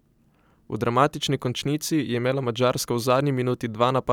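No technical faults occur anywhere in this speech recording.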